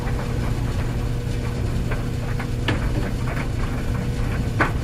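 No dropouts, clicks, distortion or level problems can be heard anywhere in the recording; nothing to flag.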